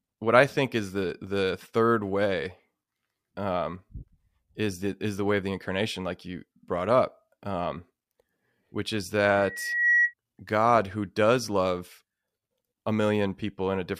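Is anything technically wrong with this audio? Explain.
Yes. Right after "which is", from 9.36 to 10.14 s, a single piercing tone near 1.9 kHz swells up over roughly half a second until it sits about 5 dB above the speech. This is loudspeaker feedback squeal: the microphone is hearing the loudspeaker it drives, and at 1.9 kHz the round trip through the loop has more than unity gain, so that one frequency keeps feeding itself and grows until the loop is broken.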